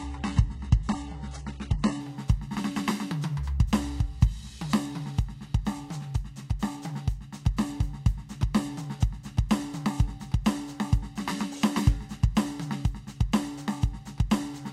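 From 0.0 to 2.0 s the music plays through an adaptive stream starting at a low bitrate. The player opened on a very thin version to begin quickly, and the smeared, swirly highs fit HE-AAC at roughly 12 kbit/s. At 2.0 s it steps up without a gap to fuller, cleaner sound, consistent with AAC-LC near 96 kbit/s. A spectrogram shows nothing above 11.1 kHz before 2.0 s, then a sudden fill of treble, while the waveform runs on unbroken.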